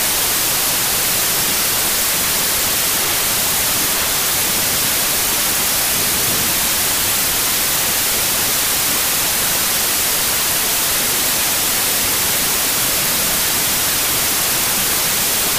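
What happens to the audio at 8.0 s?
At 8.0 s you're still hearing the wrong sample width problem, which runs through the whole clip. Audio written as 16-bit samples is being read back as packed 24-bit, so each value is stitched together from mismatched bytes and only some carry the real signal's top bits. That gives a loud wash of noise with the original sound buried underneath, running 1.5 times too fast and pitched up to match.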